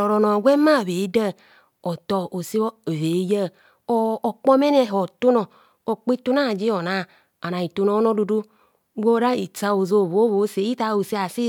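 No technical faults can be heard anywhere in it.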